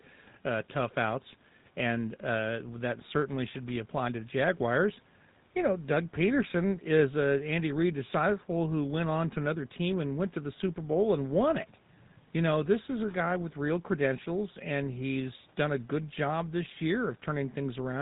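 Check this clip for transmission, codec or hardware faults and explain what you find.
The speech has passed through a GSM full-rate codec, and the damage is plainly audible from start to finish. The codec describes the vocal tract with a short-term filter and excites it with a sparse, regularly spaced pulse train that keeps only every third excitation sample, a scheme that fits the 13 kbit/s full-rate mode. Nothing above 4 kHz survives, so the speech sounds dull and band-limited, and the coarse excitation gives it a buzzy, gravelly roughness.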